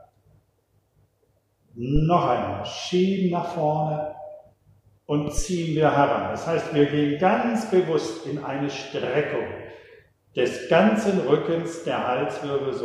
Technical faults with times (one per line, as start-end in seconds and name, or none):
1.96-2.03 phantom power thump
5.38-5.45 phantom power thump